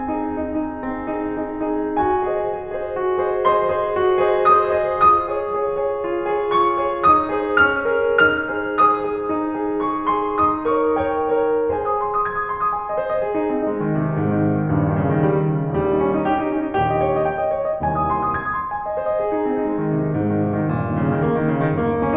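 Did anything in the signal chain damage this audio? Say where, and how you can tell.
No, nothing in the chain audibly damaged this music recording, and no stage leaves a mark anywhere in the clip.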